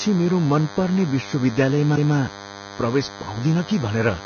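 A steady, thin buzz sits under the speech from start to finish, pulsing 100 times a second and carrying a dense stack of harmonics above that rate. It stays roughly 15 dB below the speech. This is DECT cordless phone buzz: a nearby DECT handset or base station transmits a brief radio burst every 10 ms, and the audio circuitry rectifies those bursts into an audible 100 Hz pulse train.

Throughout the clip, the speech also sounds hissy and grainy, with roughened tones, smeared attacks and nothing above 6.5 kHz. The damage is heavy, and it likely comes from Vorbis compression at a low rate, around 17.5 kbps. At that rate the codec pulls its cut-off down and quantises the upper residue so coarsely that fine spectral detail is replaced by noise of similar energy. That substitution produces the grain and the dull top end.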